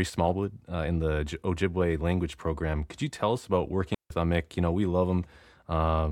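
At 3.94 s the speech drops into a clean hole of near silence lasting about 160 ms, ending at 4.10 s. This is a digital wireless dropout: the link lost too much data, so the receiver muted briefly, with no noise burst either side.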